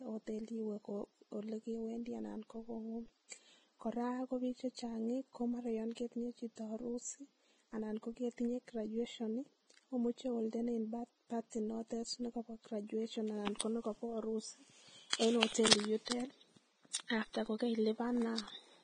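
A speech clip that sounds heavily codec-damaged all the way through. The top end stops dead around 9.7 kHz, and what's left of the treble comes across hissy and grainy, with roughened tones and smeared consonant edges. That's most likely Vorbis compression pushed to a low quality setting, which fits a bitrate somewhere near 20 kbps. At that rate the codec keeps a smooth spectral outline but quantises the fine high-frequency detail so coarsely that it turns into noise of roughly the same energy, hence the sandy texture. On top of that there's pre-echo in three spots: at 13.59 s, at 16.10 s, and from 17.08 to 17.10 s. Each time a short hiss creeps in just ahead of a sharp onset, lasting about 17, 18 and 23 ms respectively, and the attack itself sounds softened. That happens because the transform codec spreads its quantisation noise across a whole block, so when a loud transient lands late in the block, noise sized for it also fills the quiet moment just before it.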